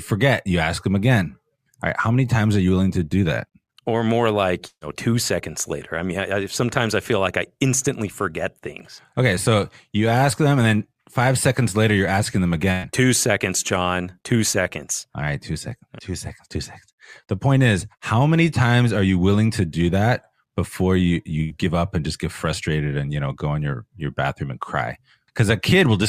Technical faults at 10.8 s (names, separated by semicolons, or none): none